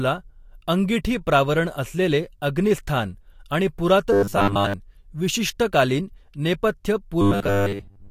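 From 4.13 to 4.74 s, between "अंगिठीप्रावरण असलेले अग्निस्थान आणि" and "विशिष्ट कालीन", and again from 7.21 to 8.10 s, the speech turns into a rigid 100 Hz buzz. That's robotic sound from repeated short buffers, likely from a 10 ms chunk looping over most of the audio while the real signal gets skipped.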